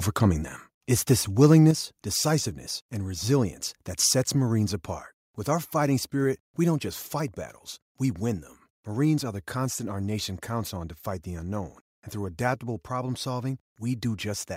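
From 1.43 to 1.58 s the loudest syllables turn harsh and crackly, likely microphone overload driving peaks about 2 dB past the converter's limit, flattening a few percent of samples. At 1.71 s voice and background drop abruptly by about 6 dB, then by about 2 dB more at 6.24 s, likely the microphone volume stepped down by the call software after the distorted peak.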